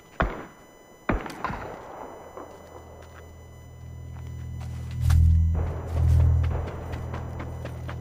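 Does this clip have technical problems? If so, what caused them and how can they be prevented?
Yes. A USB whine runs through the whole clip: a steady tone at 1 kHz with its strongest component at the 2 kHz harmonic, sitting roughly 35 dB below the program. The USB bus pulls current in 1 ms frames, and that periodic draw leaks through shared power or ground into the audio path. On a spectrogram it appears as thin, unbroken horizontal lines at 1 kHz and 2 kHz; the waveform shows little, since the tone is buried well under the signal. Prevent it by powering the interface separately or adding a USB isolator or ground-loop breaker.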